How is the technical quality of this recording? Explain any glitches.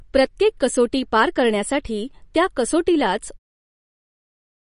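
Quality is held back by heavy data reduction across the whole recording. The damage sounds like MP3 compression, likely at a low bitrate around 40 kbps. Short of bits, the encoder removed everything above 10.6 kHz and let weak frequency lines drop in and out between frames. The speech sounds dull and watery, with swirling on sibilants and softened consonant attacks. The smooth fade-out near the end, running from 3.39 s to about 3.5 s, carries the same coloration.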